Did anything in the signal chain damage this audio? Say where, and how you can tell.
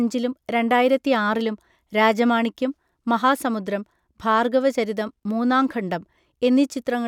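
No, nothing in the chain audibly damaged this speech recording at any stage.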